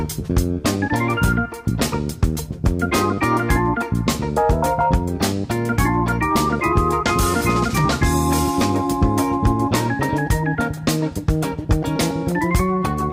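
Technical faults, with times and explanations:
Nothing stood out on listening; no technical faults could be heard anywhere in the audio.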